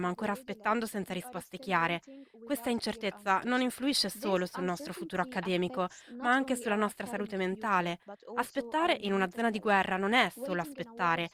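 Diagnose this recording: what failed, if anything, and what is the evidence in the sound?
No audible fault detected.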